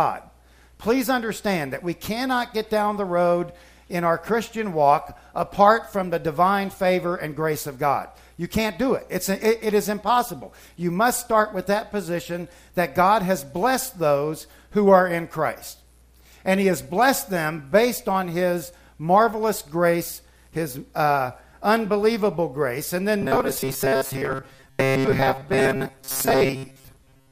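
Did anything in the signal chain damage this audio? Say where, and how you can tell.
Yes. From 23.22 s to the end at 27.31 s the sound collapses into a rigid metallic buzz at 134 Hz, the robotic sound from repeated short buffers, most likely at the driver or buffer stage. Audio arrived too seldom, so a block of about 7.5 ms was replayed to fill the gaps, skipping most of the real material. On the waveform, identical segments repeat every 7.5 ms; the spectrogram shows a steady comb of horizontal lines at multiples of 134 Hz.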